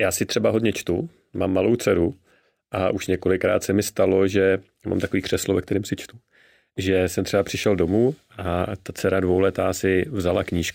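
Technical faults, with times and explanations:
Throughout, imaging from linear upsampling: the top of the speech band sounds dulled, while a faint metallic shimmer sits on sibilants. The pattern fits a rate raised from 22 kHz to 44.1 kHz by straight-line interpolation, which leaves a mirrored copy of the spectrum between 11.03 and 22.05 kHz, roughly 30 dB down. Unlike aliasing, these images mirror the real content instead of folding inharmonic tones downward.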